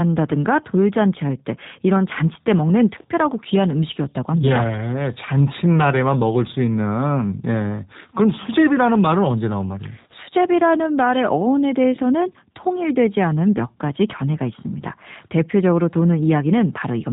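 Throughout, G.729 codec damage is plainly audible: nothing passes above 3.8 kHz, and the speech sounds rough and synthetic, fitting 8 kbit/s, unlike a clean band-limit.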